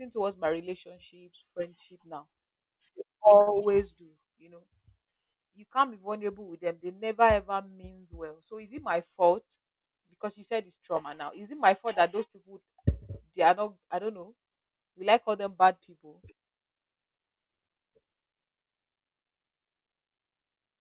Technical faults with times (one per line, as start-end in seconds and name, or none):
3.41-3.49 short stall from a late packet